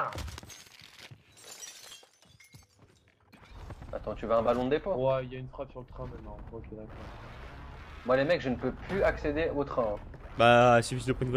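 No technical fault can be heard anywhere in the audio, and the signal holds steady without any break, distortion or disturbance worth noting.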